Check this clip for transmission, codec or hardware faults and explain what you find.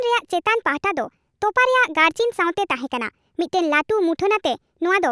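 One fault runs through the whole clip: a wrong sample rate. Speech plays about 1.38 times too fast and 5.55 semitones high, which fits 16 kHz audio played at 22 kHz. Voices sound hurried and high.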